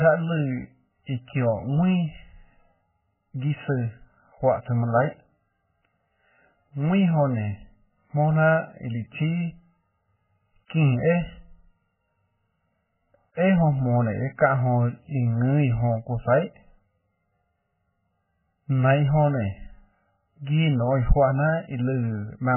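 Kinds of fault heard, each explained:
Channel delay (comb filtering): one channel arrives around 1.5 ms late before the mono sum, cutting evenly spaced notches from about 300 Hz upward, so the speech sounds hollow and phasey.
MP3 compression: likely a very low-bitrate MP3 encode, zeroing weak frequency lines frame to frame; heavy watery swirling results, with nothing above 3.1 kHz.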